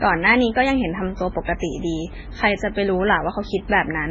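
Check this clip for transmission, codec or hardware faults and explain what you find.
One fault runs through the whole speech clip: transcoding between lossy codecs. Nothing reaches above 7.5 kHz, and smeared, warbling low-rate artefacts sit under a second, cleaner coding layer. That fits a very low-bitrate MP3 likely re-encoded as WMA, which kept the earlier damage. A spectrogram would show a hard ceiling at 7.5 kHz and patchy, blocky energy beneath it.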